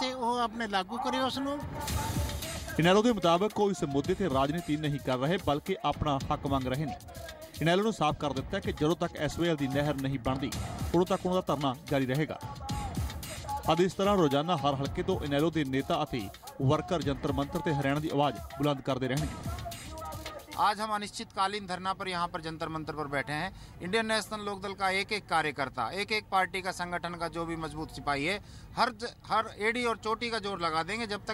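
Periodic USB or driver dropouts from 2.40 to 4.25 s: every 64 ms a tiny sliver of audio is skipped as the bus or driver stalls, producing about thirty evenly spaced ticks.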